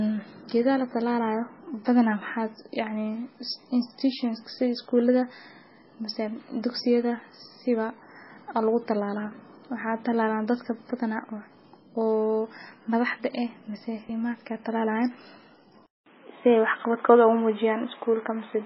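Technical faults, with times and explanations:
Throughout: MP3 compression. The speech is heavily damaged by what is likely a low-bitrate MP3 encode, which fits something near 16 kbps. Nothing is left above 5.6 kHz, so the treble stops at a hard ceiling. Weak frequency lines drop in and out between frames, giving a watery, swirling texture with smeared consonant onsets. Unlike a device change, this damage is present from start to finish and never shifts in character.
15.86 to 18.65 s: input switched to a poorer device. A 200 ms silence opens at the switch, and then the sound becomes duller and boxier because the band now stops at 3.8 kHz, lower than the codec's ceiling. The level shifts by around 5 dB, and a new background noise appears roughly 35 dB below the speech. This is likely a move to a lesser microphone or a headset call profile. The abrupt change at one moment separates it from the steady codec damage.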